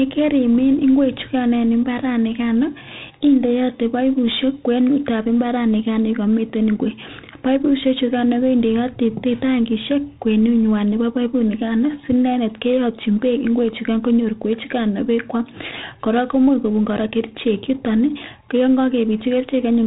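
Speech recorded with 4-bit ADPCM compression for its whole length, and the damage is heavy. Each sample is coded as a coarse step from a prediction, so a gritty hiss rides on every loud syllable, with distortion on sharp onsets where the step size lags behind. Nothing exists above 3.8 kHz, which fits a low sample rate and a 32 kbps stream. A spectrogram shows a flat ceiling at 3.8 kHz and noise filling the gaps between harmonics wherever the level rises.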